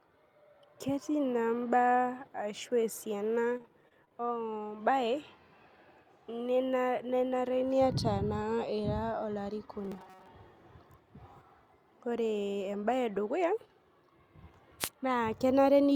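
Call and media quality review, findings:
Repeated packet loss (robotic sound), 3.57 to 4.35 s, just after "ashu esiana". Choppy stretch. Seven gaps, longest 25 ms. Network or jitter buffer. Lost packets patched by extending prior audio. About 134 ms filled in, 80 ms simply gone. Roughly 19% of the span concealed.

Robotic sound from repeated short buffers, 9.85 to 10.27 s. Rigid metallic buzz at 188 Hz, still tracking the speech contour. Likely the capture or playback buffer starving. A short slice replays over most of the span, which fits a repeat length near 5.3 ms.

Wireless microphone noise hit, 14.79 to 14.89 s. Brief swish of static over the speech. FM radio mic link. Reflections cancel the carrier, the signal fades, and receiver noise rises over the audio for about 0.1 s.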